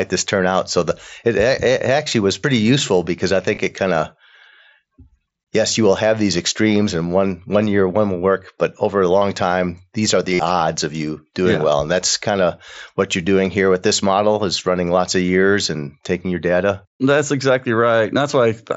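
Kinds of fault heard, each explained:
Concealed Bluetooth headset packet loss: bits of audio dropped out between headset and phone, and the receiver filled each gap by repeating the best-matching stretch of waveform it had just played. Six of these turn up. Most last 8 to 23 ms; the single-frame one nearly slips past, while runs like the one just after "pretty useful because i" come through as a brief buzzy tone. The longest, about 52 ms at 10.34 s, comes across as a short held buzz before the real sound picks back up.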